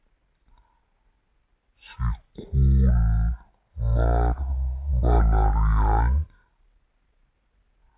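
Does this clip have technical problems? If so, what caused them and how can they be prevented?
Yes. A wrong sample rate runs throughout: the speech plays at half speed and a full octave low, which fits 16 kHz audio played back at 8 kHz without conversion. On a spectrogram, harmonics sit at half their normal frequencies and syllables stretch to double length. To prevent this, read the file's declared rate and resample to the output device's rate before playback.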